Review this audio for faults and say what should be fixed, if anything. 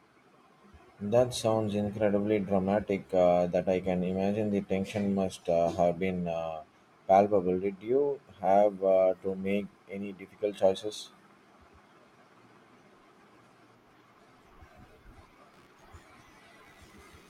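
A faint buzzing chirp, pulsing at around 70 times a second and sitting roughly 40 dB below the speech, runs from 15.53 s to 17.29 s. This is computer activity noise: processor, graphics or mouse load shifts the shared ground feeding the audio circuit. A USB isolator or separate audio interface would prevent it.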